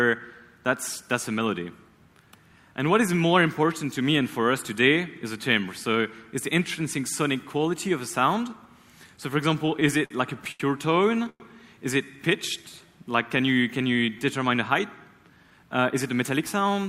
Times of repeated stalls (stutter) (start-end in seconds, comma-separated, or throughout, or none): 9.55-10.62